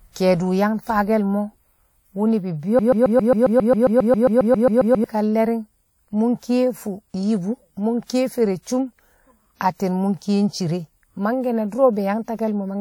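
From 2.79 s to 5.04 s the speech sticks on a single fragment about 0.13 s long, which plays back to back 17 times in an exact stutter, like a broken record, before normal speech resumes. This broken-record loop likely comes from the player, encoder or stream stalling and repeatedly sending the last piece it held, so whatever speech belonged in those two and a quarter seconds is missing.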